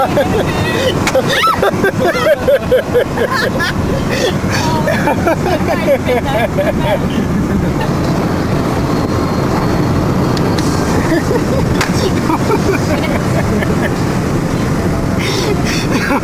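Nothing technically wrong can be heard anywhere in the audio.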